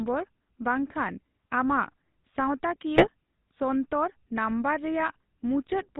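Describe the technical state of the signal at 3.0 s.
At 3.0 s the signal passes through a GSM full-rate codec at 13 kbps, which rebuilds the voice from a vocal-tract model driven by sparse, regularly spaced pulses and discards everything above 4 kHz. The result is a muffled, plainly buzzy and gravelly speech texture.

From 2.96 to 3.07 s, GSM bit errors corrupt the decoder's filter, pitch or gain parameters, which fits a few damaged frames. The spectrum twists or the level jumps, so the speech breaks into a brief squawking, gargling burst just before "ᱥᱚᱱᱛᱚᱨ ᱱᱟᱝᱵᱚᱨ".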